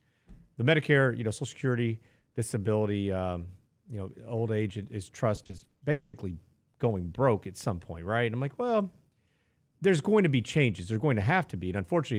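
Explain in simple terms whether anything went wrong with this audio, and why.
Two problems occur close together in this speech clip.

From 5.35 to 5.81 s there is repeated packet loss, which gives a robotic sound. Around nine tiny holes appear, none longer than 40 ms. Each is patched by stretching the previous sound, so nearly half of that stretch is fill, and the speech turns choppy.

From 5.91 to 6.15 s a fading smear of stretched sound replaces about 0.22 s of speech, with no silence. That part is gone, and the speech resumes after it. This is likely a long network dropout, where the receiver kept extending the last sound while nothing arrived.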